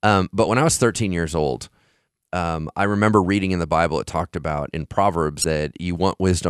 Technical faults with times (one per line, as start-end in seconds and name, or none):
5.41-5.44 damaged data in a compressed stream